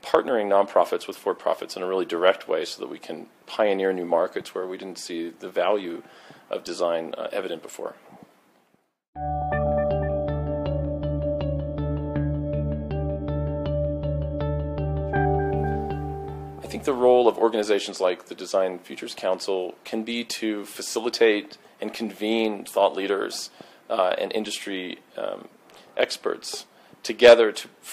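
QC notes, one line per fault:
No fault found in the clip, so there is no fault line to give.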